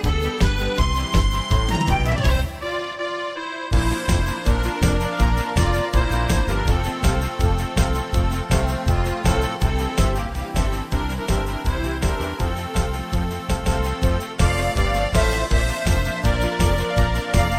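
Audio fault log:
10.16–13.77 s: digital radio blending to analogue. The receiver loses the digital stream and cross-fades over 285 ms to the FM broadcast of the same station, later returning. The level drops about 3 dB and FM hiss comes up, roughly 30 dB below the sound.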